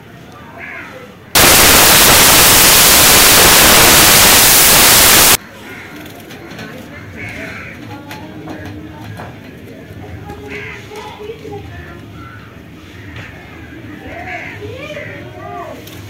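From 1.35 to 5.35 s, samples are built from the wrong bytes: the reader assembles each sample's bytes wrongly, so fast-changing low bits become the dominant part of every value. For those four seconds the sound turns into loud, harsh broadband noise, close to white on loud passages.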